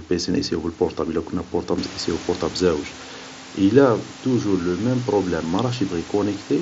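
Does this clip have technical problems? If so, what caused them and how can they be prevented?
No, no technical faults here.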